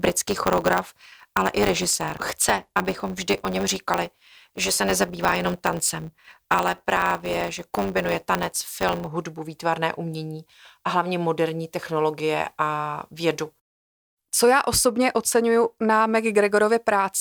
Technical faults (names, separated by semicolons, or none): block size mismatch (truncated)